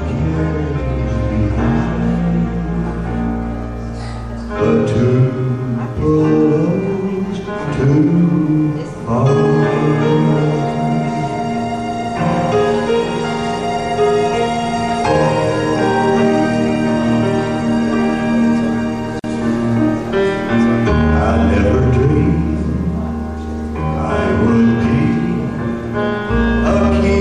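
At 19.19 s the sound just drops out for about 46 ms, a short hole with smeared edges, then picks up where it left off. That's a gap at a join of encoded pieces: two separately encoded chunks were stitched together with the encoder's start delay and last-frame padding left untrimmed.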